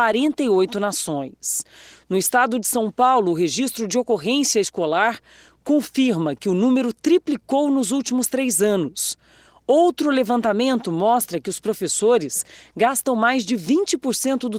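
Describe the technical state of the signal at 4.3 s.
At 4.3 s the speech is intact, with no fault, and the Opus voice compression running through it is working as intended.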